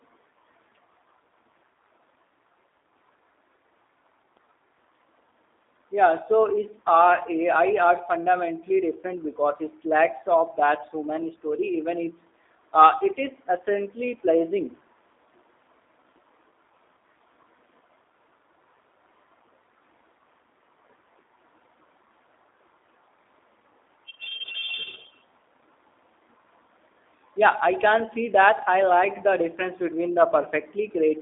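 From start to finish the speech is carried through the G.729 codec, and the damage is plainly audible. Nothing survives above 3.7 kHz or below about 300 Hz. Unlike a plain telephone band filter, the sound is also rebuilt from sparse pulses, giving a rough, synthetic edge consistent with 8 kbit/s.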